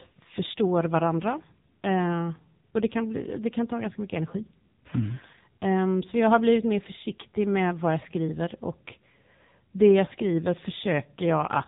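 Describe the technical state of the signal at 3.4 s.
At 3.4 s you're hearing the AMR narrowband mobile codec, which runs through the whole clip. The speech is rebuilt from a simple vocal-tract model fed by sparse pulses, so it comes out buzzy and synthetic, with nothing above 3.8 kHz, which fits a low-rate mode around 6.7 kbps.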